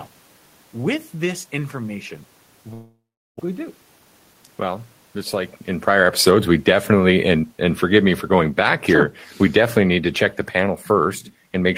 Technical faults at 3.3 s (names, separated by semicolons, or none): long network dropout